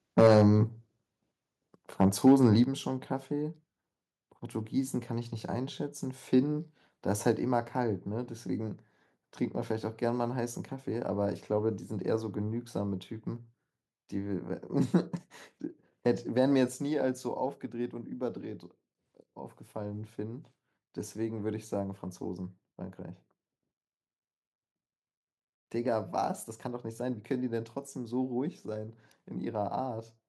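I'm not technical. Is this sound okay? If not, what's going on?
No, not quite. There are two problems, and they're related.

First, microphone overload. From 0.18 to 0.42 s the loudest bits sound harsh and crackly, as if the sound is breaking up. That's likely because the mic was turned up too high, so the tops of the loudest moments got chopped off. It's worst in that first stretch. There's a milder repeat from 2.0 to 2.46 s.

Second, the microphone volume stepped down. At 0.27, 2.64, 7.32 and 16.68 s everything, voice and background alike, suddenly gets quieter in one jump. This is likely the call software noticing the mic was too hot and turning it down on its own. The drop at 2.64 s is the biggest, right after that second rough patch. The one at 7.32 s is only slight.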